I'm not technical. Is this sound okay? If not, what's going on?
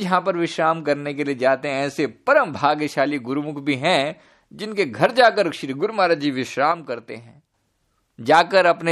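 No. From 6.72 to 7.54 s the speech abruptly quietens without going silent: one channel likely drops out, leaving only the other.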